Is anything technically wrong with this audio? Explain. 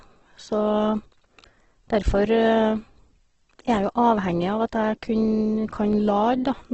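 Yes. Throughout, likely heavy Opus compression at a rate fitting about 12 kbps removes everything above 8.2 kHz and fills starved bands with noise, making the speech rough and grainy.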